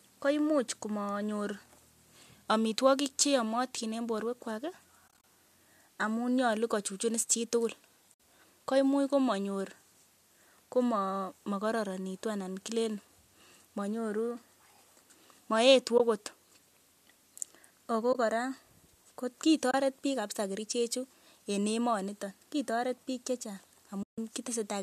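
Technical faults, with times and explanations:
5.08–5.24 s, 8.14–8.16 s, 15.98–16.00 s, 18.13–18.15 s, 19.71–19.74 s and 24.03–24.18 s: AAC frame loss with muting. The sound drops out for between 20 and 150 ms. The first loss totals 100 ms, broken into short gaps across 160 ms. The second follows "kochuchun is chitugul" and the last follows "biik che chang". Each lost frame is decoded as silence, and the overlapping windows fade the sound out and back in, leaving soft holes. The gap sizes fit 10 ms frames, likely from low-delay AAC coding.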